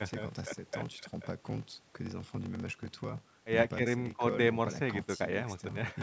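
Throughout the speech, a steady buzz at 43.1 Hz runs underneath, and everything plays slow, at 0.861 times normal speed, near its usual pitch. This is a block size mismatch (padded): short blocks are zero-filled up to what the next stage reads, which fits 1024-sample reads.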